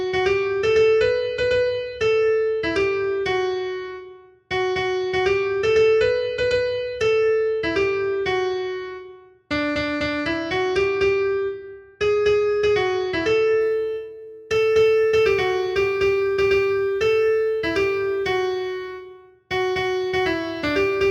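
From about 13.6 s to the end, sample clock jitter creeps in: the converter's timing wobbles by roughly a couple of microseconds, so each sample lands a touch early or late. That error scales with how fast the waveform moves, giving a faint hiss or grit around 40 dB down that swells on loud, bright passages and drops away in quiet.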